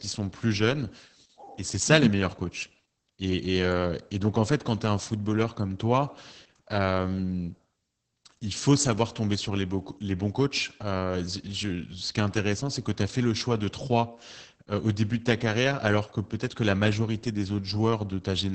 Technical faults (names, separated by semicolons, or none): Opus voice compression